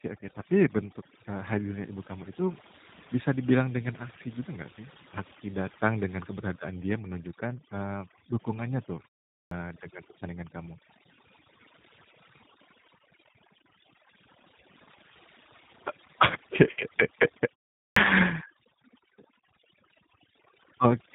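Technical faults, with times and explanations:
Throughout, overdone noise removal: the background sinks to near silence dotted with twinkling specks. A noise reduction stage set far too strongly pulls individual frequency bands down or out entirely whenever they sit close to its noise estimate, so the softer parts of the speech, breathy endings and quiet consonants, are stripped away along with the hiss and leave a hollow, sparkling residue.
Throughout, G.729 codec: the speech sounds plainly rough and synthetic, with a boxed-in, telephone quality and nothing audible above 3.8 kHz. This is G.729A at 8 kbit/s, which does not carry the waveform itself. It models each 10 ms frame with a vocal tract filter, a pitch predictor and a handful of pulses, then resynthesises the speech. The damage is clearly audible, giving the buzzy, slightly artificial texture heard across the whole clip.
9.43 s and 17.88 s, clipped start after a pause: at both points speech resumes abruptly out of silence with its opening sounds missing, about 83 ms swallowed each time. 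At 9.43 s this falls between "menunjukkan eee dukungannya tuh" and "dengan pertandingan kamu". Each follows a gap of roughly 0.4 s, long enough for the output device to drop into a sleep state; it then needs a moment to wake or relock, and the first fraction of sound is lost before playback catches up.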